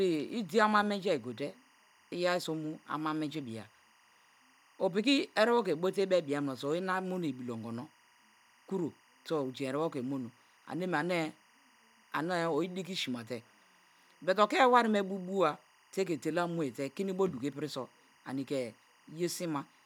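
Speech runs throughout with timecode bleed: a faint, steady chirping warble sits behind the voice, roughly 35 dB below it, from start to end. Linear timecode at 24 frames per second has leaked in from an adjacent track or cable. Its square wave toggles between tones near 1 kHz and 2 kHz. A spectrogram would show continuous horizontal bands at those two frequencies, with harmonics above, persisting through pauses where the waveform otherwise flattens.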